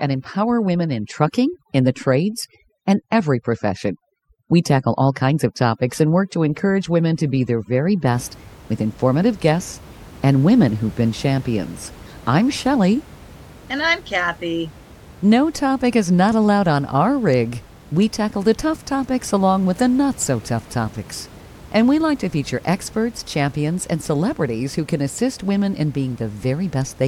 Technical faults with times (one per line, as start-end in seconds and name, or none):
0.00-8.12 overdone noise removal